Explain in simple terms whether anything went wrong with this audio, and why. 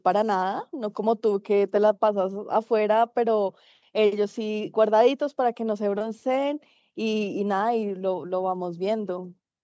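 Nothing went wrong with this speech recording; it simply passed through a call's microphone processing, which trims away the deepest bass as it is designed to.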